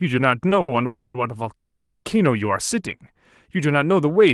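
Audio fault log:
0.49 s and 0.61–0.70 s, short stall from a late packet: the sound hangs on slightly too long, with a faint buzz or dip, for about 20 ms and then 70 ms. A packet arrived late, the jitter buffer emptied, and the receiver stretched the last sound before resuming where it left off, with nothing lost.
0.86–1.16 s and 1.56–2.06 s, call audio freeze: the sound turns into a fading buzz-like continuation, about 280 ms in the first case and 480 ms in the second, which decays into roughly 70 ms of silence. The likely cause is packets held up in transit, emptying the jitter buffer so the receiver extended the last sound. Playback then resumes from where it stopped, adding a gap with little or nothing missing.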